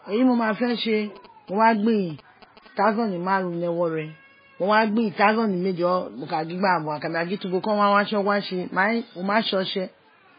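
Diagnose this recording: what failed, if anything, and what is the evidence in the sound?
The treble ends abruptly at 5 kHz throughout the speech, and the sound is watery and swirling, with chirping on s sounds and smeared onsets. This points to the codec stage, likely MP3 compression at a low bitrate, around 16 kbps. Starved of bits, the encoder cut everything above 5 kHz and let weak frequency lines switch on and off between frames. Band-limited telephone audio would be clean, not swirling.

From 0.54 to 2.68 s, a galloping dit-dit-dit of short buzzes sits well below the speech. These are GSM signalling bursts entering the analogue wiring. A nearby 2G phone was exchanging radio bursts with its network, and the audio circuit rectified them into a buzz with a 217 Hz repetition rate. Mains hum would be steady at 50 or 60 Hz and its harmonics. This buzz comes in irregular groups and then stops.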